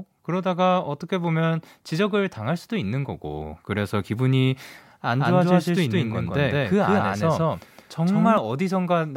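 From 5.2 to 8.4 s the speech carries a doubled audio track: an equally loud full-band copy trails roughly 150 ms behind, likely from a second, slower capture path. On the waveform each burst repeats as a shifted twin, and spectrogram onsets appear twice, starting and stopping abruptly.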